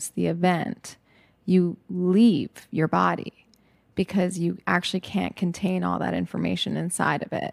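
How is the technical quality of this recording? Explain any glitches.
No glitches can be heard anywhere in the recording, and its technical quality gives nothing to explain.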